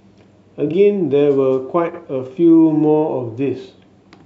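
Frames out of order garble this speech at 0.68–0.74 s and 1.89–1.99 s. Two adjacent blocks play swapped, each about 23 ms then 46 ms, which fits one and two decoder frames per side, producing a flutter.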